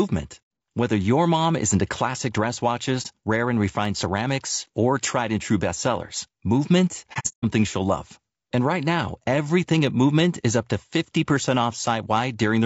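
Throughout the speech, voices sound rough and grainy, with noise filling the gaps between pitch harmonics, the plainly audible damage of low-delay AAC compression. The likely cause is AAC-ELD's short frames, which resolve harmonics poorly and, at a bitrate around 32 kbps, leave a coarse, synthetic-sounding top band.

At 3.02 s, a brief hole of about 30 ms marks AAC frame loss with muting. From 7.13 to 7.45 s, more frames drop: about 240 ms is missing, scattered over 300 ms, with the longest gap about 150 ms. The decoder zeroed each lost frame's spectrum, and the overlapping windows fade the sound out and back in. That gives these gaps softened edges rather than the abrupt cut of a hard dropout.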